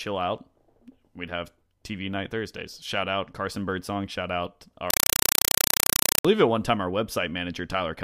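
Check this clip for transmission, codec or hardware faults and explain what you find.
One fault is present in this speech clip: a compressed stream played as audio, from 4.90 to 6.25 s, ending just before "at one time our". An AC-3 (Dolby Digital) bitstream is being treated as ordinary PCM samples instead of being decoded. Each frame becomes a 4 ms burst of noise followed by zero padding, repeating at 31.25 Hz, which fits a 192 kbps stream. The result is loud, chattering static that replaces the speech for that stretch.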